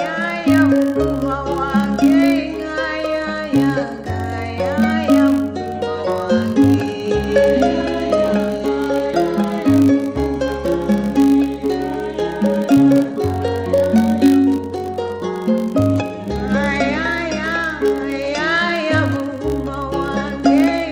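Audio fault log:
Throughout: filter restarted on every block, so each block starts from silence with a small transient, giving a 50 Hz buzz that tracks the sound's level.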